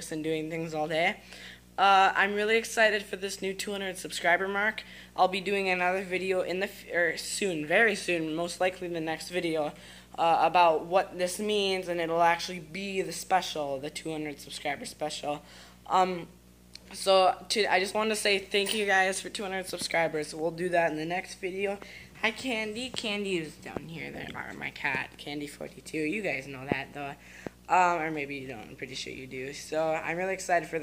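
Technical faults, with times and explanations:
Throughout, video or display buzz: there's a steady 60 Hz buzz sitting under everything, roughly 30 dB down from the main sound, with a gritty hash riding on top of it. That's what you get when a monitor or video cable leaks into the audio path. The picture's field refresh at 60 Hz gets picked up as a pulsed interference, and its sharp edges spray harmonics upward, which is where that fizzy hash comes from.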